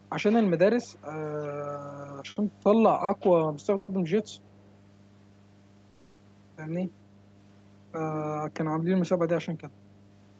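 A steady low tone at 50 Hz runs under the whole clip, about 25 dB below the speech. This is mains hum: a ground loop or a nearby transformer has let the power line leak into the signal path, and it never lets up.

From 0.92 to 0.99 s a faint scrap of the speech returns about 30 dB down, trailing the original by 436 ms. This is an echo leak, likely from a far end playing the call on a loudspeaker whose echo canceller let some of its own microphone pickup back into the call.

At 2.31 to 2.39 s and again at 3.04 to 3.11 s a sound is held unnaturally long, with a slight buzzy dip, stretched by 50 ms and then 40 ms. These are short stalls from a late packet: the jitter buffer ran dry, the receiver drew out the last sound, then resumed exactly where it left off.

From 3.76 to 3.91 s, and again from 5.90 to 6.22 s, the sound hangs as a fading buzz for about 120 ms and then 290 ms before the speech carries on intact. 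This is a call audio freeze, likely from packets held up in transit. The receiver filled the wait with the continued tail of the last sound, inserting a pause without losing anything.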